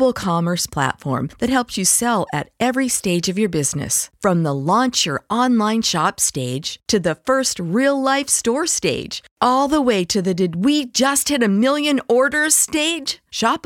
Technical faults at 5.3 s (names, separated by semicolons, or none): none